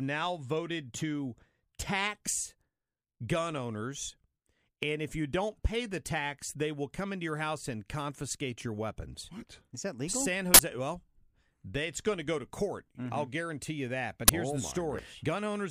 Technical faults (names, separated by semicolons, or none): uninitialised buffer